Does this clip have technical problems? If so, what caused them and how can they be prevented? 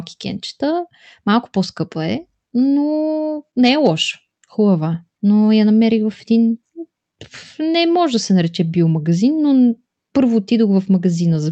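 No, nothing here needs fixing; this speech came through an ordinary call path with an Opus codec, and nothing in it needs preventing.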